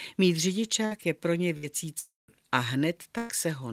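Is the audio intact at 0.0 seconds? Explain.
Yes, the speech at 0.0 seconds plays through cleanly with no audible fault at that moment.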